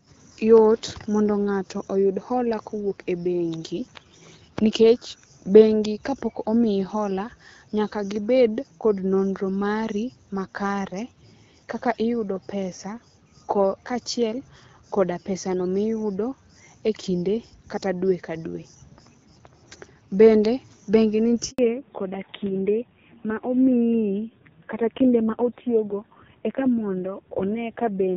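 At 21.51 s there's a handover gap. The call hopped between networks, and for 80 ms no speech frames made it through. The speech fades out fast and sits in silence until 21.59 s, so whatever was said in that slice is just gone.

Straight after that, from 21.59 s to the end, comes a fallback to narrowband. Before this point the HD Voice (AMR-WB) link carries the higher band with only light codec damage. From here on there's nothing above 4 kHz, and the speech turns duller and rougher. That points to a low-rate narrowband codec, around 5.9 kbit/s.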